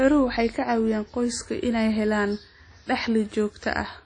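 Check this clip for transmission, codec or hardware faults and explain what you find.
One codec fault runs through the whole speech clip: WMA compression is the likely cause of what is heard. From start to finish the audio sounds washy and ringing, with a hiss that swells and fades with the speech. That fits a transform codec using long blocks at a low bitrate, around 32 kbps, in an early WMA version. Quantisation noise smears across tens of milliseconds around each sound, and weak spectral lines are discarded. On a spectrogram there is a hard ceiling at 10 kHz with nothing above it, and below that the harmonics break into patchy, flickering fragments. On the waveform, quiet gaps carry noise that rises and falls with the neighbouring speech.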